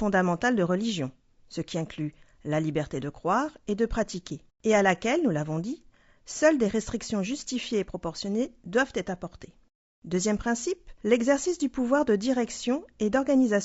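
Throughout, the speech sounds rough and grainy, with noise between harmonics and a thin, synthetic top band, likely low-delay AAC compression at a bitrate around 32 kbps.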